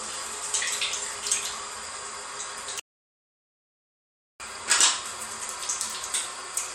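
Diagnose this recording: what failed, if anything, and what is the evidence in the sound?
An audio dropout to silence runs from 2.80 s to 4.40 s, about 1.6 s of the recording lost. The sound cuts off abruptly and resumes mid-flow, with silence and no room tone between. The likely cause is a lost input link or device upstream of the recorder, which kept writing silence.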